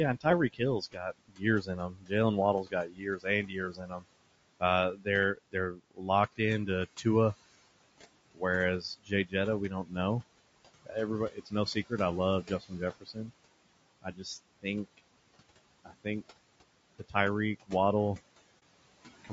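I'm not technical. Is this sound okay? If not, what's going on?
No. All the way through, the background noise drops away between phrases and swells back under them. These are noise suppressor artifacts: a filter keeps judging what counts as steady noise and pushing it down by a large amount, so the room noise keeps shifting.

The speech itself sounds rough and grainy, a bit synthetic in the upper range. That fits low-delay AAC compression, likely the kind used for video calls. It chops sound into very short pieces to avoid lag and then stores too few details.

In several places, quiet sounds and word endings seem swallowed or faded: from 0.18 to 4.06 s, 4.6 to 7.06 s, 8.34 to 9.96 s, 10.82 to 13.31 s, 14.02 to 14.99 s, 15.85 to 16.25 s and 16.99 to 17.71 s. This is speech cut by the noise suppressor, which mistook those soft bits for noise. The first stretch loses the most, around two seconds in total.

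From 18.59 to 18.63 s there is a brief dip. This is AAC frame loss with muting: one short piece of the compressed sound went missing, about 30 ms, and the player filled it with silence, fading out and back in.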